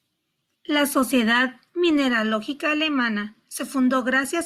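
No technical faults can be heard anywhere in the clip.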